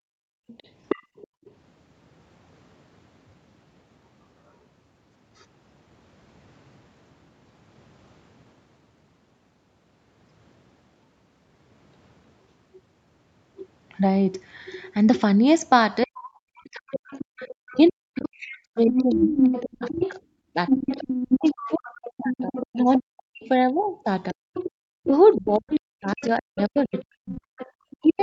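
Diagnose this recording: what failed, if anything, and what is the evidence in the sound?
Background gated by the echo canceller, 0.0–0.47 s and 1.03–1.45 s: in call processing, the canceller clamped the microphone while the loudspeaker played, pulling room sound down about 32–33 dB.

Other side's voice leaking through, 0.47–1.5, 16.92–17.93, 18.87–20.11, 20.68–22.99 and 24.54–28.2 s: a second voice sits from about 15 dB below the talker to equal level, likely residual loudspeaker echo that the canceller failed to remove.

Speech suppressed in double talk, 16.04 s to the end: the talker's voice, band-limited to 8 kHz by the call's microphone processing, dips by as much as roughly 40 dB, likely because the canceller attenuated both sides during overlap.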